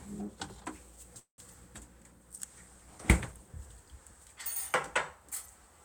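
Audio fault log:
1.19–1.40 s, call audio freeze: the sound stalls into a fading tail, then about 110 ms of silence, and resumes intact, likely from late packets draining the jitter buffer.
2.11–3.56 s, call bitrate drop: the encoder falls from 96 to 21 kbps for about 1.4 s, so coarser coding makes the sound rough and dulled until bits return.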